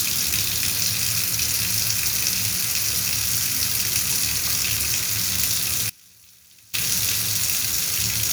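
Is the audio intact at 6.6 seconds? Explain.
No: an audio dropout to a faint residue runs from 5.90 to 6.74 s. The signal likely broke off while the path stayed live, abruptly leaving faint sound about 25 dB down.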